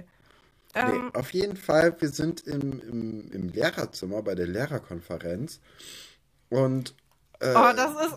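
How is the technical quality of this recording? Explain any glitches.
The recording has one clear technical problem: periodic USB or driver dropouts. From 0.11 s to 4.03 s, just before "bei der", the speech breaks up at a steady rate of one gap every 0.1 s, around forty in total. Each time, roughly 10 ms of audio is lost and replaced by silence, as if a background process were stalling the USB bus or audio driver at a fixed interval. The result is a regular ticking or popping, ten times a second, riding on the speech.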